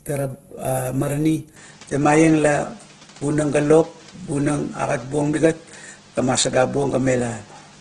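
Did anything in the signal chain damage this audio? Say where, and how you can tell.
Yes, at two stages. At the codec, the whole clip sounds rough and grainy, with vowel harmonics smeared into noise and nothing above 12.3 kHz. This is likely heavy Opus compression in its music (CELT) mode. The encoder keeps each band's energy but, short of bits, fills band detail with folded or noise-like content, which fits a rate near 12 kbps. A spectrogram shows a hard ceiling at 12.3 kHz and fuzzy, textured bands where harmonics should be clean lines.

At the capture end, from 1.56 s to the end, the sound turns duller and shifts in level by roughly 5 dB, and a new background noise sits about 30 dB under the signal. The most likely cause is an input switched to a poorer device mid-recording. The new microphone or headset profile passes a narrower band and brings its own noise floor. There is no gap at the change. 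On a spectrogram, the ceiling drops abruptly from 12.3 kHz to 9.2 kHz at 1.56 s. The waveform envelope steps in height there, and a faint noise floor appears between phrases.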